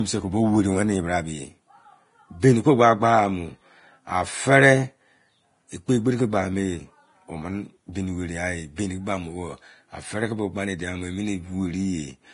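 Throughout, the speech sounds hissy and grainy, with roughened tones, smeared consonant onsets and nothing above 10.6 kHz. The likely cause is heavy Vorbis compression, fitting a bitrate near 30 kbps, where treble detail is quantised so coarsely it turns into noise.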